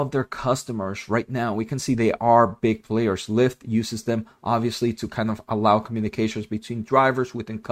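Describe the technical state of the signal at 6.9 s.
At 6.9 s the signal is intact, with no audible fault at that moment.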